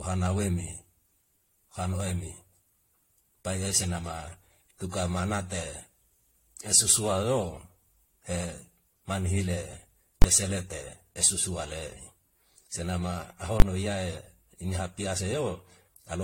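Throughout the speech, the likely cause is generation loss: repeated lossy re-encoding, around five times, consistent with AAC-LC at about 64 kbit/s. Each pass requantises on a shifted frame grid, so noise and spectral holes accumulate. The result is swirly, hollow speech with blurred attacks and nothing above 16.6 kHz.

At 10.22 to 10.24 s and again at 13.60 to 13.62 s, invalid numbers at full scale appear: a calculation produced infinite or invalid values, pinning 20 ms blocks to maximum amplitude. Each is heard as a single loud bang.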